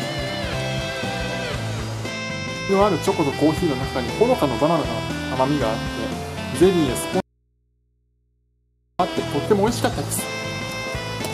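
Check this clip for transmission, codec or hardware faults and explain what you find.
One fault is present. Audio dropout to a faint residue, 7.20 to 8.99 s: the sound cuts out abruptly for 1.79 s and returns just as suddenly. The gap holds only mains hum, around 45 dB below the signal. The likely cause is the wanted signal being lost while the path after the break stayed live, so the open input picked up hum.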